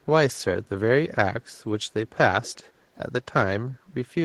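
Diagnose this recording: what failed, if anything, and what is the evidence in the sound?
A short echo leak appears between 2.42 and 2.54 s: a faint copy of the speech, well below the direct level, trailing it by 163 ms. The likely stage is call processing: a far-end echo canceller let some loudspeaker pickup through and returned it.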